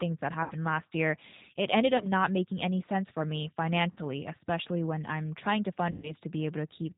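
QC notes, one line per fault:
throughout, G.729 codec: the speech passed through a G.729A coder at 8 kbit/s, which models each frame with a vocal tract filter, pitch predictor and sparse pulses and discards everything above 4 kHz, so the voice sounds band-limited, plainly rough and slightly synthetic.
0.44–0.54 s, 1.97–2.06 s, 3.91–3.99 s and 5.91–6.14 s, VoIP packet loss concealed by the speech codec: audio went missing for 60, 30, 60 and 120 ms, which fits one to four lost 30 ms packets. The decoder stretched its last pitch and filter with falling gain, giving a buzzy tone or coloured noise that fades. Weak, distorted speech lingers just afterwards while the decoder's state recovers.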